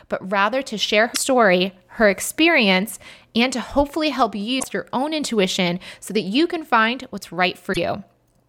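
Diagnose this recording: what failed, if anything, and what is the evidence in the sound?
The codec stage failed: damaged data in a compressed stream causes brief glitches at 1.11–1.17 s after "but rather to share", 4.56–4.64 s between "and to hopefully help" and "your own intuition so", and 7.69–7.78 s. The decoder misreads corrupted frames and resyncs. Unlike network dropouts, these come from corrupted bytes in the stream, not lost packets.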